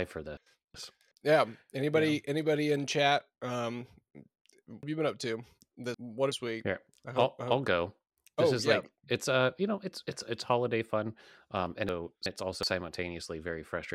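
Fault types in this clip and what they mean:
Chunks out of order: a roughly 372 ms block of the speech turns up late and plays after material that should come after it, so the sequence gets scrambled with a hard cut at each join. It happens at 0.37 to 1.12 s, again at 4.83 to 6.32 s where the late block is three chunks behind, and at 11.89 to 12.63 s right after "holiday fun um and".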